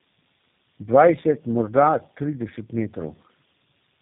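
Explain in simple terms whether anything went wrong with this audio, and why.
Tandem speech coding runs through the whole clip, from start to finish. The speech was squeezed by a phone-network speech coder, unpacked, and squeezed again as it crossed from one network to the next, three times in a row. Each pass builds on the damage left by the one before, so the voice sounds rough, muffled and warbly, and it has nothing above about 3.6 kHz, which takes away crispness.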